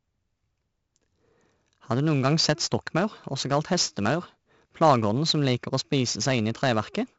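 4-bit ADPCM compression runs through the whole of this speech clip, and the damage is heavy. Each sample is coded as a coarse 4-bit step from a predicted value, so a gritty hiss rides on every louder stretch and rises and falls with it, while sharp onsets smear where the step size cannot adapt quickly enough. Nothing sounds above about 7.7 kHz, which dulls the top and fits a 64 kbps stream at a low sample rate.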